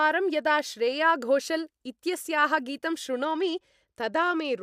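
A Bluetooth SBC bit pool drop affects this speech recording from 3.25 s, just after "इत्यस्याः गीतं", until the end at 4.62 s. The treble dulls and gritty noise rises, which fits the encoder cutting its bit pool from 28 to 13, about 102 kbps, starving the upper sub-bands and coarsening the rest.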